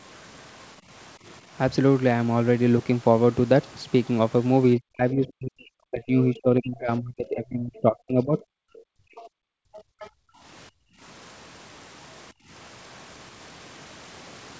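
From 4.76 to 8.39 s the speech keeps dipping, by something like 35 dB at its worst and for around three seconds in total. That's most likely speech suppressed in double talk: both ends talking, and the echo canceller turning everything down. Inside that stretch, at 5.28 s, there's a brief scrap of a second voice, roughly 30 dB under the talker. That's probably the other side's voice leaking through from the loudspeaker.

Then from 8.67 to 11.0 s the room sound drops away, about 40 dB at the deepest, for roughly two seconds in all. That's background gated by the echo canceller while the loudspeaker was playing. Within that gap, at 9.16 to 9.28 s and 9.77 to 10.09 s, come two more bits of likely leakage from the far end, each around 25 dB down. The same gating returns briefly at 12.33 to 12.49 s, dipping about 27 dB before the canceller lets go.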